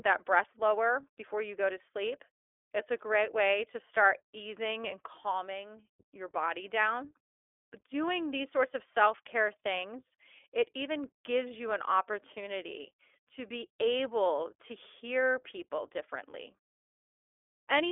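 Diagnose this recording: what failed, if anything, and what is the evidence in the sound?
The codec stage is at fault. The speech carries plainly audible iLBC codec damage throughout, a rough, synthetic grain that fits independently coded 20 ms frames at 15.2 kbps. On a spectrogram, energy sits in a 300 Hz to 3.5 kHz telephone band, with nothing above 3.7 kHz.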